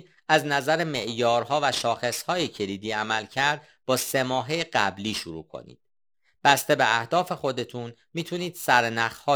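Periodic clock jitter runs through the whole speech, with the converter's sample clock wobbling at around 3 kHz. Each component gains sidebands about 3 kHz either side, strongest on high frequencies, visible on a spectrogram as mirrored bands. It gives a metallic roughness that disappears in pauses.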